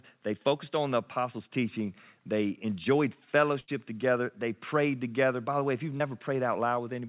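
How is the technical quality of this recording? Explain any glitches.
The speech has two packet-loss glitches, one longer and one brief. The audio carries nothing above 4 kHz, the narrow band of a telephone call, which points to a G.711-style codec at around 64 kbps.

The burst of packet loss runs from 3.60 to 3.70 s. A run of packets arrived too late or not at all. The receiver covered the hole for 77 ms by extending the last sound and lowering its level as the gap went on. About 80 ms of real audio is gone. The result is either a held buzz or a fading hiss before the speech picks up again further along, skipping the lost stretch.

The short concealed packet loss falls between 5.98 and 6.02 s. Roughly 20 ms of the call failed to reach the decoder in time, and the receiver synthesised 22 ms to bridge it. It did this by continuing the preceding sound, from its pitch if voiced or as shaped noise if not, and then blending back into the real signal. 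It comes across as a quick smear or wobble, and a short sound could drop out entirely.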